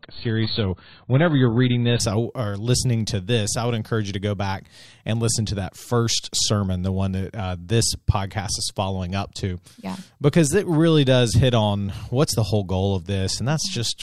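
For the first 2.0 s the speech sounds dull and smeared, with nothing above about 4.5 kHz and a swirly, watery coding texture, then the top end and clarity snap in at once with no gap. That is an adaptive stream starting at a low bitrate: playback began on a heavily compressed rendition, which fits roughly 16 kbit/s AAC, and stepped up to a much fuller one, around 96 kbit/s, once the connection had been measured.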